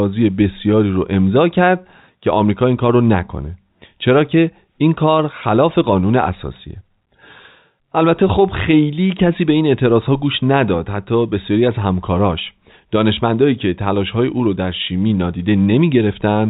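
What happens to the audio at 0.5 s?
Nothing goes wrong at 0.5 s: the speech there carries on intact, with only the narrow band of ordinary G.711 telephone coding, which lets nothing above 4 kHz through.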